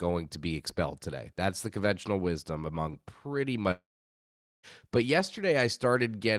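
Right after "conventional wisdom among pretty", from 3.71 s to 4.66 s, the speech trails into a short fading buzz, then 0.8 s of silence, and resumes with 0.92 s of audio missing. A long network dropout is the likely cause, with the receiver briefly stretching the last sound.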